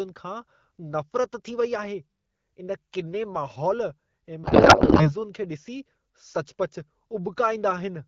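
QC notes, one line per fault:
4.44 to 5.11 s, codec payload misread: the sender packed AMR in octet-aligned form but the receiver read it as bandwidth-efficient, so every field lands in the wrong bit position while the frames still look valid. For about 0.68 s the speech gives way to garbled noise and warble that barely tracks the talker, until the two ends agree on the packing again. The AMR-WB channel around it, at a rate that fits 12.65 kbit/s, carries clear speech with light coding texture.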